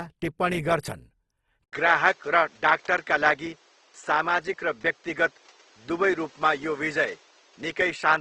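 From the very start the speech has a grainy, rough texture with nothing above about 12.4 kHz, most likely Opus compression in its music (CELT) mode at around 16 kbps, where the encoder fills starved bands with folded or noise-like content instead of leaving holes.

At 1.64 s there's an 80 ms gap, and from then to the end the top stops at about 8 kHz. A new, fairly quiet noise floor sits well below the speech, and the level barely changes. That's likely the input switched to a poorer device.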